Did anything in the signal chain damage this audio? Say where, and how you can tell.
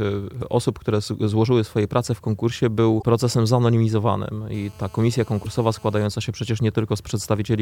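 Yes. Damaged data in the compressed stream, at the codec stage, causes brief glitches (a chirp, squawk, click or short hole) at 0.38, 2.99 and 5.42 s. Lost frame sync shows as smeared broadband smudges and waveform discontinuities about 40 ms long.

GSM phone buzz enters the analogue wiring from 4.54 to 6.06 s, a steady, raspy 217 Hz buzz about 29 dB below the sound. On a spectrogram it forms evenly spaced harmonic lines throughout.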